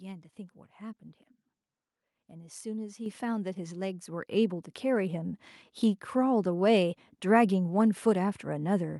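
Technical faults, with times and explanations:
3.06 s and 4.08 s, microphone volume stepped up: the input volume of the microphone was raised in a single jump twice, first by about 7 dB and then by about 5 dB, as the call software judged the pickup too quiet. The speech and the background noise get louder at the same instant, which shows the change is a gain step applied before any processing and not the talker getting louder.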